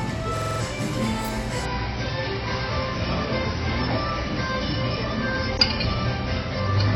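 A short everyday-sound recording with two problems. From 0.37 to 0.60 s there's a system hang loop: a 46 ms slice repeats five times at about 21.5 Hz, which fits a stuck 2048-sample buffer, and roughly a fifth of a second of real audio is lost. Then at 1.65 s the adaptive stream drops to a lower bitrate and stays there to the end. The top end is suddenly gone, with nothing above 6.6 kHz, consistent with a switch from about 96 down to 24 kbit/s AAC.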